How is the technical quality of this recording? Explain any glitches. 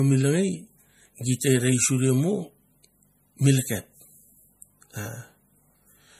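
The recording carries plainly audible compression damage across the whole speech clip. MP3 compression, present from start to finish, is the likely cause. The encoder seems starved of bits, consistent with a rate around 40 kbps, so it discards the top band entirely, leaving nothing above 15.2 kHz, and drops quieter frequency components that flicker in and out between frames. The result is a watery, swirling texture, with metallic chirping on sibilants and softened, smeared consonant onsets.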